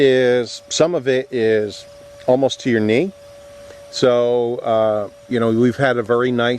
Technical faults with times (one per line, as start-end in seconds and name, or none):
none